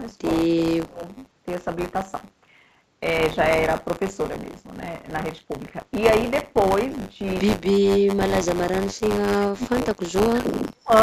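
A steady robotic buzz at 100 Hz rides on the speech throughout. This is buffer tearing: a small slice of each buffer repeats audio from roughly 30 ms earlier.

The speech dips or drops out in pieces from 0.40 to 1.03 s (by about 20 dB), then from 7.55 to 7.99 s, 8.42 to 10.00 s and 10.16 to 10.92 s (by as much as about 40 dB). The likely cause is speech suppressed in double talk, where an echo canceller turned down the near talker while the far side was speaking.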